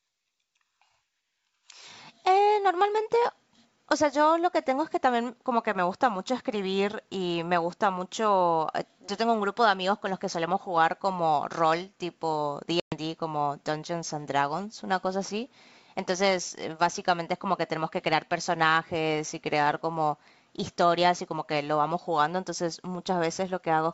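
At 12.80 s the speech drops into a hard-edged silent gap, about 120 ms long, ending near 12.95 s. This is packet loss on an ADPCM call, several packets' worth. The decoder's predictor and step size lose track, so the speech returns slightly distorted before settling.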